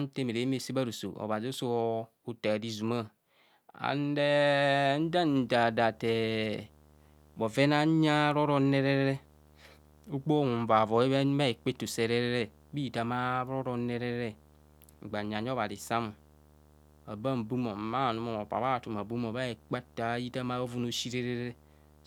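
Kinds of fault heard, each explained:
Video or display buzz: a screen or video cable is leaking into the audio, giving a buzz at its 75 Hz field rate with hash riding on top. It comes in at 5.01 s and stays to the end, sitting roughly 30 dB under the speech.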